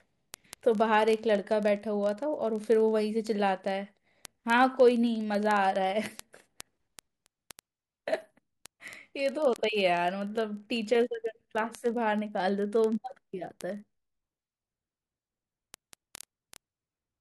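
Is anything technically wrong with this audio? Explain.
Yes. Word clock ticks run from 0.12 s to 17.19 s: sharp clicks of uneven strength at a steady rate of about one every 30 ms under the speech. The receiving device's clock drifts roughly 700 ppm from the sender's, so each slip drops or repeats one sample.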